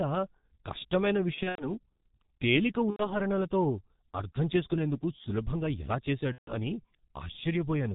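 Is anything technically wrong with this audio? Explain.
Yes. Two faults are audible in this speech clip.

G.723.1 codec, throughout: the speech has been squeezed through this low-rate telephony codec at about 6.3 kbit/s. It models the voice in 30 ms blocks and discards everything above 4 kHz, and its coarse, slowly updated voice model is working hard here. The result is heavy damage: a muffled, hoarse, narrowband sound in which consonants smear together and lose their edges.

VoIP packet loss concealed by the speech codec, at 1.34 to 1.69 s, 2.90 to 3.13 s, and 6.32 to 6.53 s: audio packets went missing, and the decoder filled each gap by extending its last pitch and filter settings while turning the level down. The first gap is patchy, with about 150 ms missing over a span of roughly 240 ms and the longest hole near 90 ms. The other two are solid gaps of about 90 ms and 150 ms, consistent with three and five lost 30 ms frames. 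Each gap sounds like the voice stretching into a fading buzz or tinted noise, and the sound stays thin for a short while after real audio resumes.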